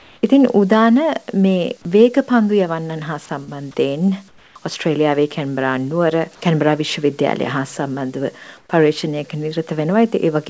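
The audio carries call-path faults, heard over a band that stops at 8 kHz, which fits a wideband codec such as G.722. From 0.00 to 0.23 s, 4.28 to 4.55 s and 8.57 to 8.69 s, the real background gives way to a steady, featureless hiss, about 2, 7 and 3 dB quieter. This is likely comfort noise in place of the background, filling pauses when transmission stops. At 3.44 to 3.50 s a brief smear marks a short concealed packet loss. About 30 ms went missing and was patched by extending the preceding sound.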